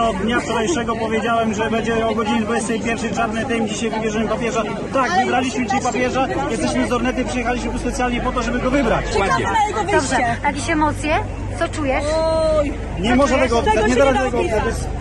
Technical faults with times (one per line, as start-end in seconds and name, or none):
1.19 compressed frames skipped